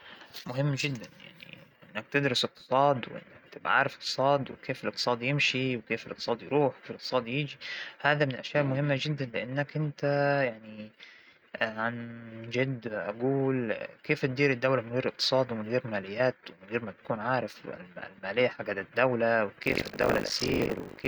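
From 19.62 s to the end, the speech carries buffer tearing. The writing program and the playback hardware have slipped, and they cross inside each period. About a third of every buffer replays audio from some 70 ms earlier. The hard joins give a steady 50 Hz robotic rattle.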